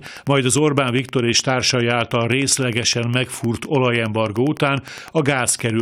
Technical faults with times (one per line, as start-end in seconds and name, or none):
0.00-5.81 Wi-Fi interference